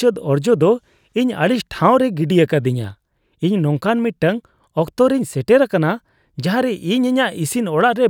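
No technical fault can be heard anywhere in the recording; the speech signal stays intact and continuous throughout.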